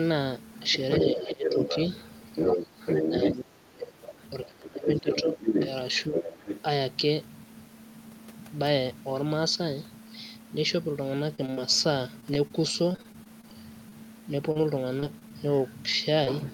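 Right from 0.62 to 3.33 s you get the other side's voice leaking through at roughly the same level as the talker. That's likely a loudspeaker echo the canceller didn't fully remove. It returns more faintly, about 15 dB down, from 3.98 to 4.48 s, then at full level again from 5.1 to 6.6 s.

Overlapping those stretches is speech suppressed in double talk. The talker's voice dips by around 15 dB between 1.03 and 1.73 s, briefly at 2.66 s, hard (close to 30 dB) from 3.09 to 5.4 s, and only slightly between 6.07 and 6.45 s. The canceller likely couldn't tell the two voices apart while both were talking, so it turned everything down, and the talker ducks and chops out.

Later the audio goes choppy, with pieces missing, from repeated packet loss. Packets kept arriving late or not at all, and each hole was patched by stretching the previous sound. This happens from 11.35 to 11.59 s, from 12.21 to 13.53 s and from 14.51 to 15.32 s, with single gaps of up to about 40 ms.

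Finally, short concealed packet loss at 13.89 s and 16.24 s. Each time about 20 ms went missing and got papered over, so you hear a quick smear or wobble rather than a proper dropout.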